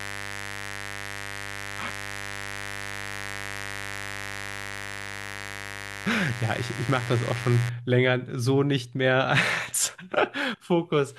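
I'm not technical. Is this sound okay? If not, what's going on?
No, not quite. From the start until about 7.7 s there's a mains buzz under the speech: a steady, raspy hum that's fairly loud. Mains power at 50 Hz is leaking into the recording, probably through a dimmer or poor shielding, then it stops.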